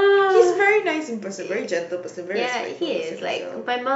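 A short stretch of recorded speech, with nothing technically wrong to report. No audible faults turn up anywhere in it.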